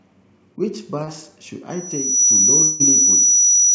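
At 1.04 to 1.09 s the speech briefly smears and wobbles, a short blur where the sound seems to stall for a moment. This is short concealed packet loss. About 40 ms of the call arrived too late for the decoder, and the receiver papered over roughly 34 ms of that by extending the preceding sound, following its pitch where it was voiced, before cross-fading back into the real signal.

From 1.70 s to the end, a piercing tone at 5.9 kHz swells up over about half a second and then sits roughly 15 dB above the speech, dominating everything. That is a loudspeaker feedback squeal. The microphone is hearing the loudspeaker it drives, and at 5.9 kHz the loop gain rose above one, so the tone kept reinforcing itself until the amplifier's limit capped it. Its height is notable because the call path passes nothing above 8 kHz.

Underneath the squeal, from 2.63 to 2.82 s, the speech gives way to a smeared, fading continuation of the last sound that never drops to silence, and the speech then resumes with about 0.16 s simply gone. 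That pattern points to a long network dropout as the likely cause: no packets came through for that stretch, and the receiver filled the whole gap with concealment rather than playing the missing audio.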